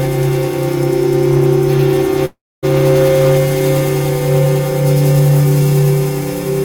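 Hard clipping runs through the whole piece of music. The level driven into some stage exceeds what it can pass by about 5 dB, so the highest peaks, around 2 percent of the waveform, are sliced flat. Those squared-off tops generate high harmonics that did not exist in the music, heard as a gritty crackle riding on each loud moment, such as strong attacks and dense passages, rather than a constant fuzz.

A call audio freeze interrupts the sound from 2.25 to 2.65 s. The receiver stops getting fresh data for about 0.37 s, most likely because packets were delayed in transit and the jitter buffer drained. The last fragment of music is stretched into a brief fading buzz that drops to silence for about 0.26 s. When data resumes, playback continues from where it stopped with nothing lost, so the rest of the clip runs about 0.37 s late.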